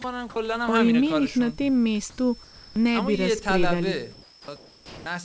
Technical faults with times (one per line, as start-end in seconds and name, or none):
0.02-0.04 sound dropped by the voice detector
2.10-2.18 comfort noise in place of the background
2.44-2.76 comfort noise in place of the background
4.12-5.06 comfort noise in place of the background
4.44-4.48 onset clipped by the voice detector